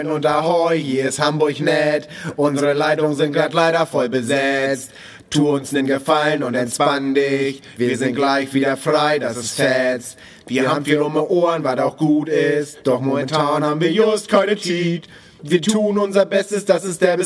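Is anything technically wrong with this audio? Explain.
No, nothing technically wrong can be heard anywhere in this audio.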